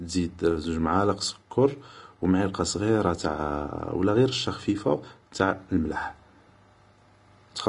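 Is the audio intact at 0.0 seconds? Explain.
No. At 0.0 seconds the speech already carries damage that runs through the whole clip. It is likely Vorbis compression at a low setting, consistent with roughly 33 kbps. Nothing is present above 10.6 kHz, so the top of the spectrum is cut off. Below that, the codec quantises the treble so coarsely that fine detail turns into noise of similar energy. The result is plainly audible: a hissy, grainy texture, roughened tones and softened attacks.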